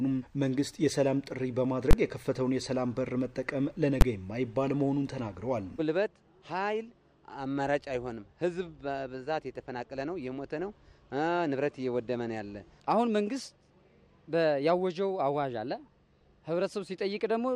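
Two invalid numbers at full scale faults hit the audio, at 1.91 to 1.93 s and at 4.01 s. Each is a sharp bang where infinite or invalid sample values were pinned to maximum level, with lengths fitting 1024- and 512-sample blocks.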